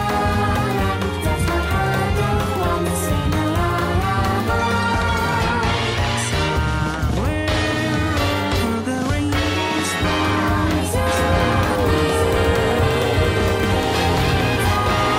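At about 11.07 s a doubled audio track kicks in and runs to the end. A dry second copy trails the original by roughly a second and a half, a few dB quieter. It's likely a slower capture path feeding the same signal back in.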